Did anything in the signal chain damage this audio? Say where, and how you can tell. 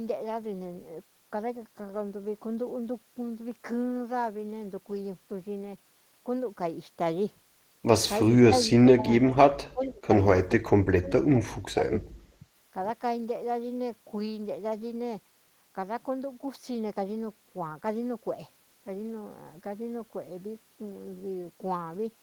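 Yes, in call processing. The speech dips and drops out in pieces at 8.35–8.51, 8.94–9.06, 9.27–9.36, 9.72–10.09 and 10.59–12.02 s, by about 20 dB (about 5 dB at 9.27–9.36), about 30 dB in the last. This is likely speech suppressed in double talk: the echo canceller attenuated its own talker along with the loudspeaker echo.

A faint delayed copy of the speech surfaces at 9.83–9.88 s, lagging by 429 ms and about 35 dB below the direct speech. This brief scrap is likely echo leak: the far end's canceller missed some loudspeaker pickup and returned it.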